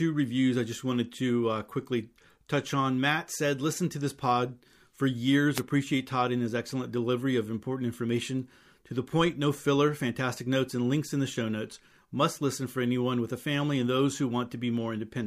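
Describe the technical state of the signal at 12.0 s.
At 12.0 s the audio is intact, with no fault audible at that moment.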